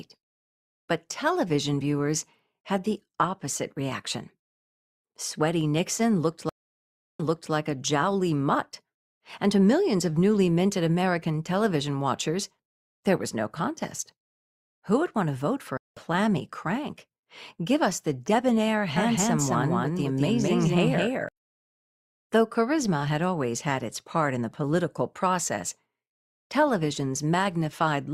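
At 6.49 s the stream connection dropped and the player reconnected with a fresh decoder. That leaves 700 ms of silence, after which the audio resumes 340 ms earlier, repeating material just heard. A second stream reconnect at 15.77 to 15.99 s gives a gap of about 190 ms, and the audio comes back roughly 150 ms later, skipping a short stretch.

From 18.97 to 21.29 s a doubled audio track appears, likely from the same signal being captured a second time through a slower path. A full-band copy trails by roughly 200 ms at about the same level, with no decay or room colour. It starts and stops abruptly, like a hard, dry echo.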